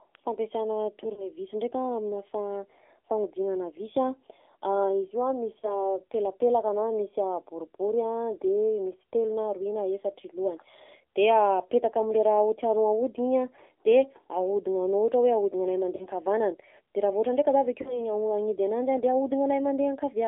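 Speech heard through an AMR narrowband mobile codec. The voice is confined to roughly 300 Hz to 3.6 kHz, leaving a spectrogram with a hard ceiling and an empty bottom band. It has a plainly buzzy, synthetic texture, which fits a low bitrate around 7.4 kbps. Lost AMR speech frames appear at 1.14–1.27 s and 5.60–5.87 s, each a brief warble, and at 15.96–16.07 s (just before "nkavanana de") and 17.82–18.13 s (after "ohatra ndraika za avy"). The later two each come from two consecutive lost frames. At these points the decoder repeats its last pitch and vocal-tract settings with falling gain, so the waveform shows a short, fading, oddly regular stretch and the spectrogram shows frozen harmonics.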